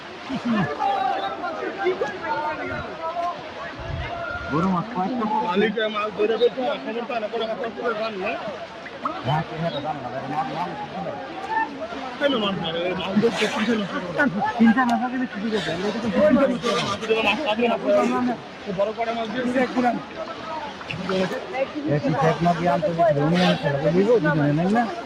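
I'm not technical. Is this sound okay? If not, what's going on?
No. A noise suppressor applied to music or sounds, a filter built for speech, was left on for the whole clip. It treats steady tones and fading tails as noise and turns them down, so the level keeps rising and falling and sounds uneven and thin.

The sound cut by the noise suppressor is most noticeable at 0.0–0.3, 1.33–1.8, 2.82–3.8, 6.5–6.9, 8.54–9.01, 9.94–12.21, 18.36–18.68 and 20.04–20.88 s. In these spots held or fading parts sink noticeably, and the longest dip runs from 9.94 to 12.21 s.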